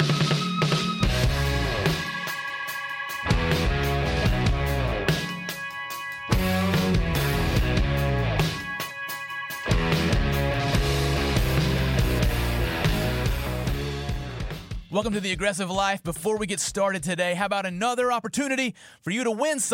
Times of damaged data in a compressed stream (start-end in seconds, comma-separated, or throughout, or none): 8.89